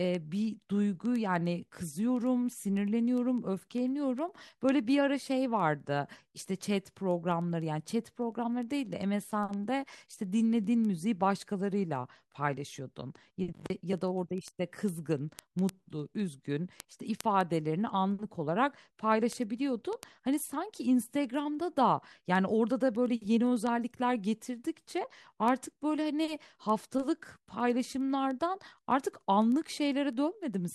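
Word clock ticks run from 0.15 s to 30.73 s, across the whole speech clip. The receiving device is running on its own clock rather than locking to the sender's, with a mismatch of around 200 parts per million. Each time the two clocks slip past each other, one sample is dropped or repeated. The result is sharp ticks of uneven strength, about ten every second, roughly three hundred in all.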